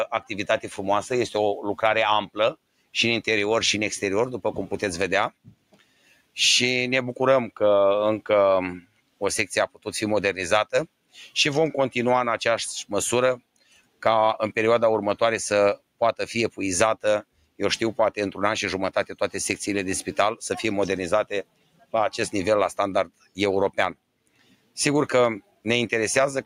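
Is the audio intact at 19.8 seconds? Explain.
No. At 19.8 s, as throughout, a noise suppressor applied to music or sounds mistakes sustained tones and decaying tails for noise and pulls them down by around 10 dB. Attacks pass but held sound sinks, gated by steadiness, not level like compressor pumping.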